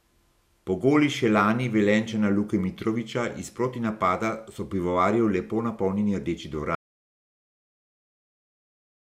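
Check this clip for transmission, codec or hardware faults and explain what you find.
One fault is present: an audio dropout to silence that begins at 6.75 s and runs to the end of the clip, about 2.3 s in all. The speech cuts off mid-flow and the signal falls to silence, with no room tone, hiss or decay behind it. The likely cause is lost input, such as a disconnected device, a failed link or a mute, while the recorder kept writing empty samples. Whatever was said after 6.75 s is not recoverable.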